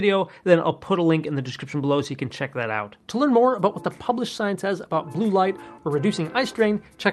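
There are no technical faults to describe in time order, since none can be heard.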